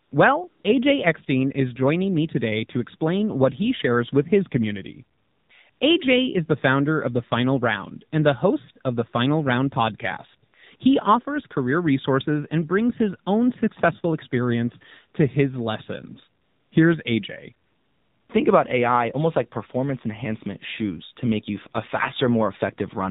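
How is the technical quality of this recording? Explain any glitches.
The quality is pretty rough: it's speech coming through a mobile call link, and the codec is clearly audible the whole way through.

The AMR narrowband mobile codec is the main issue. Everything above 4 kHz is gone, and the voice sounds buzzy and synthetic because it's rebuilt from a vocal-tract model plus a few pulses per frame. The damage fits a low mode of around 7.4 kbps.

AMR comfort noise appears in eight short gaps: 0.04–0.12, 0.48–0.64, 5.18–5.50, 5.70–5.80, 10.50–10.54, 10.76–10.80, 16.42–16.72 and 17.66–18.30 s. The phone decided nobody was talking and stopped sending speech, so the receiver filled in smooth synthetic hiss that switches in and out. The longest gap is about 640 ms.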